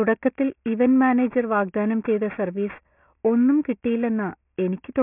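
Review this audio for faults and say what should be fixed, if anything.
There's aliasing running the whole way through this speech: it sounds like it was dropped to about a 6 kHz rate with no anti-alias filter, so content above 3 kHz folds back as gritty, metallic sibilance, roughly 25 dB down. Always low-pass below the new Nyquist before resampling.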